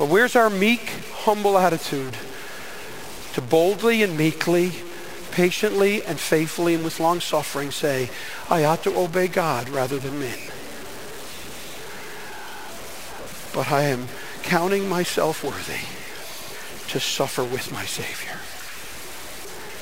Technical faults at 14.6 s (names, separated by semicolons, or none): stuck bit